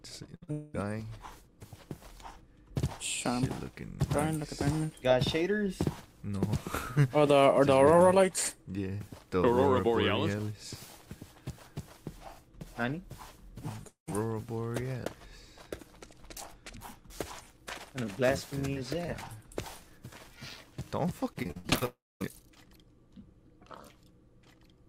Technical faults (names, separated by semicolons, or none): burst of packet loss; short concealed packet loss; long network dropout; repeated packet loss (robotic sound)